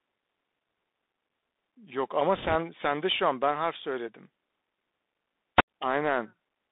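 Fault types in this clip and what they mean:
Bluetooth CVSD headset codec: The speech runs through the narrowband headset codec, which sends one up-or-down bit per sample at 64 kHz and keeps adapting its step size. The audio is held to roughly 200 Hz to 3.7 kHz, so it sounds boxed-in and telephone-like. The codec damage is plainly audible: a granular hiss sits under the speech, s sounds turn scratchy, and loud bright moments smear where the step size can't keep up.
Bit errors on a Bluetooth voice link: Bits on the headset link were corrupted from 2.35 to 2.55 s, at an error rate of roughly a few percent. Each bit in this kind of coding moves the signal by only one small step, and a wrong step fades out quickly. The result is a rushing, crackly burst of noise laid over the speech for about a fifth of a second, not a sharp click.
Wireless microphone squelch dropout: At 5.56 s the radio signal of the wireless microphone faded far enough that the receiver's squelch shut the output off. 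Close to the fade the hiss rises, and then the sound drops into near silence for about 13 ms. By 5.63 s the speech has returned, and a little noise may come back with it.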